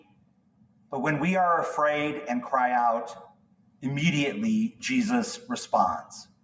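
A noise suppressor built for speech stays active across the whole clip and treats steady, held material as noise. Its gain swings by around 20 dB, so sustained parts and decaying tails keep sinking and recovering, giving a pumping, thinned-out texture where only sharp onsets pass intact.

Sound cut by the noise suppressor is clearest in three stretches: from the start to 0.92 s, from 3.19 to 3.84 s, and from 6.03 s to the end. In each, the suppressor mistakes the sound for noise and pulls it down by up to about 18 dB for up to about a second, so the level sags and tails cut off abruptly.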